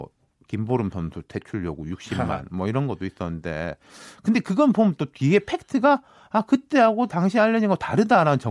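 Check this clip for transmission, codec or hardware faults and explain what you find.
Nothing turns up here; the speech comes across steady and intact, with no transmission, codec or hardware problems to report.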